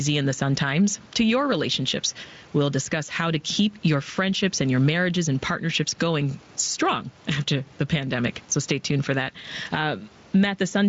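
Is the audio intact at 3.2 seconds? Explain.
No. At 3.2 seconds, as across the whole clip, the gain swings by around 10 dB, pulled down under each louder syllable, bringing loud and soft parts closer and squashing the speech. This is gain pumping, likely from excessive input gain with a fast limiter clamping every peak.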